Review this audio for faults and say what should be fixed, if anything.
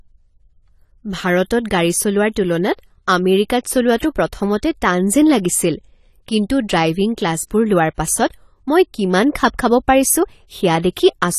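AAC compression damage runs through the whole recording: the speech sounds dull and smeared, with nothing above 14 kHz and a fizzy, warbling texture on sibilants and held vowels. The pattern is likely from AAC-LC encoding at a low rate, one that fits about 32 kbps, where the encoder lowers its cut-off and quantises each frame's frequency lines so coarsely that bands drop out or blur. To prevent it, export at a higher AAC bitrate or deliver in a lossless format.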